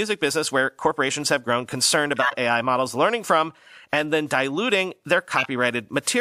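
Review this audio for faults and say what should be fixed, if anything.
Corrupt frames were decoded at three points in this speech: 2.16–2.34 s after "corporations have grown concerned", 3.93–3.98 s between "models learning from" and "then diluting their", and 5.37–5.47 s after "then diluting their". Damaged bits in the compressed data were decoded as valid, so misread gains and codes put energy at the wrong frequencies. Each event is a loud burst or chirp peaking around -5 dBFS, lasting one to a few frames. To prevent it, add error detection so damaged frames are concealed rather than played.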